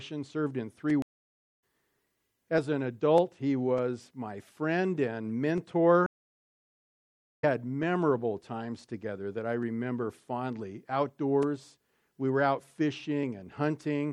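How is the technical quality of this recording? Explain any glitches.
The technical quality is compromised by lossy coding across the whole clip and by two dropouts where the audio breaks off and resumes at a later point.

Throughout, the sound has a watery, swirling texture with dulled treble and metallic chirping on bright, noisy components, and transients arrive smeared. This is likely MP3 compression at a low bitrate, which fits roughly 64 kbps. With so few bits, the encoder cuts off the upper band and discards weak spectral lines that then flicker in and out from frame to frame.

At 1.02 s the audio drops to silence for 0.6 s, returning at 1.62 s. At 6.06 s a longer gap of about 1.4 s follows, ending at 7.44 s. Both are stream reconnects. The connection was lost, playback stalled, and a fresh decoder picked up the stream mid-flow. Because a live stream keeps running during the outage, the sound resumes past where it stopped, about 0.7 s later after the first gap and about a second later after the second, so material is missing rather than delayed.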